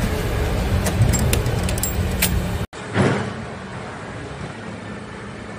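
At 2.65 s the input was likely switched to a poorer device, and the sound changes with it. After a silence of 80 ms it returns about 10 dB quieter, with nothing above 10.5 kHz and a faint new background noise, and stays that way to the end.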